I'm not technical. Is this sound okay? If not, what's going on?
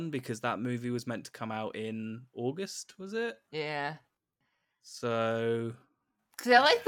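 No. From about 2.83 s, right after "to come out in", through to the end of the clip, the speech is a time-stretched section. It plays at roughly 0.74 times normal pace while the pitch stays the same. The likely cause is software stretching that stretch of audio to fill a set length, keeping the pitch by repeating tiny slices of sound. That makes the slowed portion drag.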